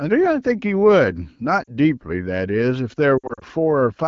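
Lost AMR speech frames at 1.64–1.73 s and 3.17–3.44 s: the decoder fills gaps with fading repeats, causing a brief warble, then scattered dropouts up to 60 ms.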